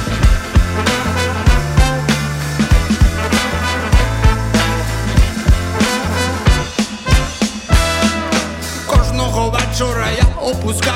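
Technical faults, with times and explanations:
No technical faults are audible; the signal stays continuous and level-stable with nothing breaking in or dropping out anywhere in the clip.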